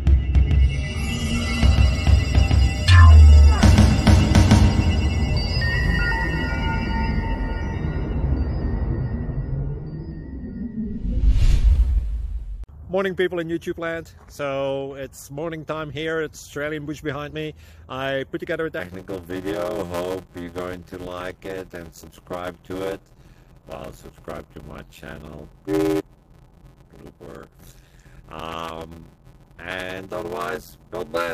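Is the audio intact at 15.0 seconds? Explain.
Yes, the audio is intact at 15.0 seconds, with no dropout, click, distortion or other fault audible at that point.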